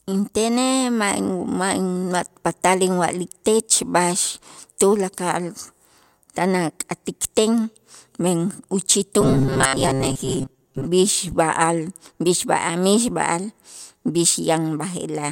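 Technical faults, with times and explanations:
9.21–10.87 s, robotic sound from repeated short buffers: the speech turns into a stiff metallic buzz near 134 Hz that loosely follows the words. The likely cause is audio arriving too late, so a fragment of about 7.5 ms is looped, filling roughly half this stretch while the missing audio is skipped.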